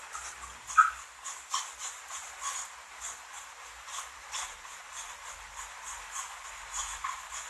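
AAC compression runs throughout: the audio is dull, with nothing above 12.1 kHz, and carries a plainly audible warbling, fizzy smear. This is likely from AAC-LC at a low bitrate, which fits about 32 kbps, trimming the top band and coarsely quantising what remains.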